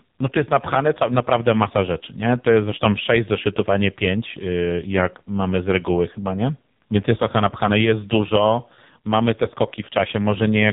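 Throughout the clip, the speech has been squeezed through the AMR narrowband mobile codec at a very low bit budget, consistent with roughly its 5.15 kbps mode. Nothing above about 3.8 kHz survives, and the crude vocal-tract model leaves voices heavily buzzy, thin and synthetic.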